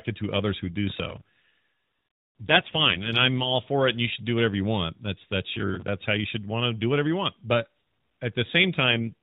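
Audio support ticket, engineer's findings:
AMR rate drop, 2.40–3.57 s (ending just before "for it and you") and 8.80–9.14 s. Speech turns rougher and buzzier with the same 4 kHz top edge and no gap, which points to the AMR-NB link falling from 12.2 to about 5.9 kbps. Spectrogram: smeared harmonics; waveform continuous.

Processor overload crackle, 5.54–5.88 s, between "that's that's" and "how you should want". Gritty tearing over the speech as roughly ten buffers, likely about 10 ms each, miss their deadline and repeat stale audio. Waveform: hard-edged discontinuities; spectrogram: vertical broadband clicks.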